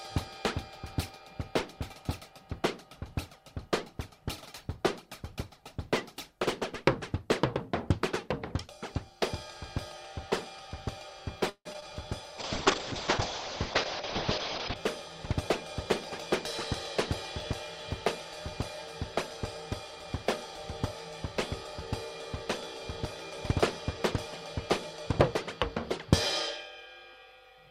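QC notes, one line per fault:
11.49–11.67 s, call audio freeze: packets were likely held up in transit, so the jitter buffer ran dry. The receiver stretched the last sound into a decaying buzz or hiss for about 0.16 s, including roughly 60 ms of silence, before the delayed audio arrived. Playback then resumes exactly where it stopped. Nothing is lost, but a gap has been inserted, and everything after it runs about 159 ms later than before.
11.73–11.76 s and 11.80–11.84 s, short concealed packet loss: in each case about 20 ms of audio failed to reach the decoder in time. The receiver covered the hole by extending the preceding sound, following its pitch where it was tonal or using shaped noise where it was not, then crossfaded back into the real signal. Each one is heard as a brief smear or wobble.
12.39–14.82 s, call bitrate drop: the call's bandwidth estimate collapsed, and the Opus encoder was cut from 96 kbps to 6 kbps, staying at the bottom for about 2.35 s. 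At that rate the coding becomes coarse and the audio band shrinks from 20 kHz to 8 kHz. The result is rough, watery and muffled, with the top end missing. It clears when the bitrate recovers at 14.82 s.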